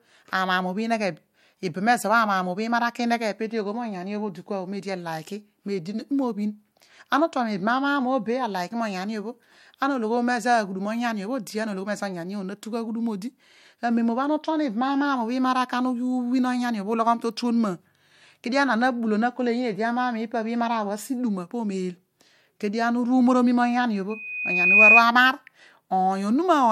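Speech recording with loudspeaker feedback squeal from 24.10 to 25.03 s: a 2.5 kHz tone swells over roughly 0.7 s to around 10 dB above the speech. The microphone is re-amplifying its own loudspeaker. Unlike a steady interference whistle, it grows by itself before stopping.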